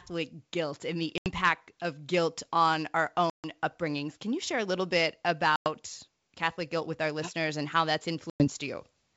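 Speech over a G.722 wideband telephone link, clear to about 7 kHz, is interrupted by four dropouts from packet loss on an ADPCM call, at 1.18–1.29 s, 3.30–3.46 s, 5.56–5.69 s and 8.30–8.48 s. These are silent gaps of about 80, 140, 100 and 100 ms, each a run of several packets. On a waveform each is a flat, hard-edged hole, and on a spectrogram a blank vertical band. Afterwards the decoder's predictor and step size are briefly out of step, so the sound returns slightly distorted before settling.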